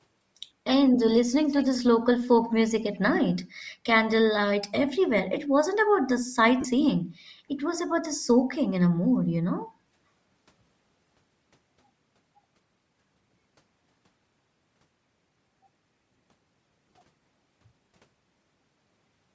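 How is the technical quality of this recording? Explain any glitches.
Quality is limited by persistent codec coloration, with two brief echo events and two short dropouts in the speech.

Bluetooth LC3 compression, throughout: a grainy, breathy edge on the voice, likely from LC3 at around 32 kbps with 7.5 ms frames, where noise fills zeroed upper bands. The audio extends to 8 kHz.

Echo leak, at 1.47–1.78 s and 2.93–2.99 s: a delayed copy of the speech arrives about 199 ms late. It is roughly 15 dB down the first time and about 35 dB down the second. The likely cause is a far-end loudspeaker the echo canceller did not fully suppress.

Lost LE Audio frames, at 6.61–6.65 s (37.5 ms, fitting five frames) and 16.88–16.94 s (30 ms scattered over 60 ms, in short runs): the decoder repeats the last spectrum with randomized phase, producing a brief noisy smear.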